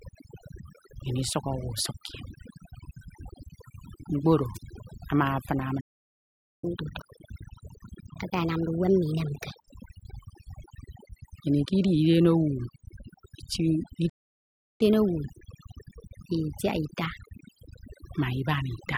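Right from the start the whole speech clip has overdone noise removal. The denoiser was pushed too hard, so any frequency band sitting close to its noise estimate gets pulled way down or switched off, and the quieter parts of the voice go along with it. You hear the background drop away and break up into little twinkling specks.

At 4.54 s there's a wireless microphone squelch dropout. The analogue FM link faded far enough that the receiver's squelch muted the output. You get a quick lift of hiss, then a hole of roughly 45 ms of near silence, and the voice comes back by 4.62 s.

At 5.80 s the sound just stops mid-flow for about 0.82 s and picks up again at 6.64 s. That's a playback stall, most likely the player running dry of data or its thread getting blocked. Straight after, from 6.64 to 9.64 s, there's catch-up at higher speed. The player resamples its backlog at 1.25 times normal speed, so the voice runs quicker and sits about four semitones higher before settling back down.

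The same thing happens again later. At 14.09 s the audio cuts out for about 0.70 s, a second playback stall, again likely from the player starving or stalling. It resumes at 14.81 s. Then from 14.81 to 17.81 s there's a gentler catch-up at higher speed, at 1.15 times, with the pitch up around two semitones, and after that it drops back to normal speed and pitch.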